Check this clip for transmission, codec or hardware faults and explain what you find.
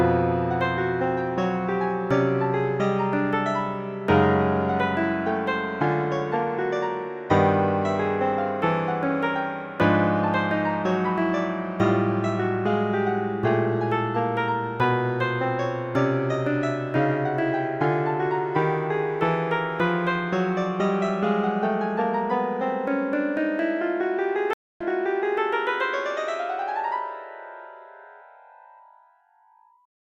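One fault is present in this recording of everyday sounds: a stream reconnect from 24.53 to 25.40 s. The connection dropped, leaving about 270 ms of silence. A fresh decoder then picked up mid-stream. Audio resumes 0.6 s earlier, repeating a short stretch, and its first frame fades in.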